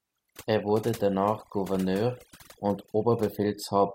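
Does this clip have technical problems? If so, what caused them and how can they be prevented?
Yes. Overdone noise removal runs throughout this speech: the background drops and breaks up into twinkling specks as bands near the estimated noise level are cut away. Prevent it with gentler reduction settings.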